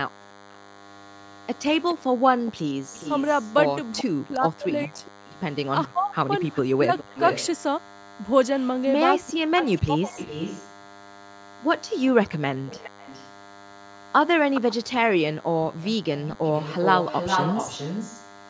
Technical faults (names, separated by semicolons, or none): DECT cordless phone buzz; background gated by the echo canceller; echo leak; speech suppressed in double talk